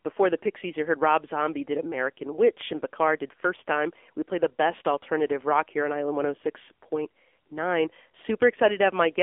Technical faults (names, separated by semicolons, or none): AMR narrowband mobile codec